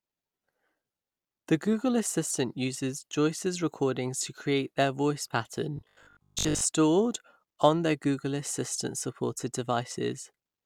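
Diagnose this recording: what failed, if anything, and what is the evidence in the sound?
Robotic sound from repeated short buffers runs from 5.77 to 6.63 s, where the speech becomes a rigid metallic buzz fixed at 50 Hz. The likely cause is a driver or buffer underrun, with a 20 ms block replayed in place of most incoming audio.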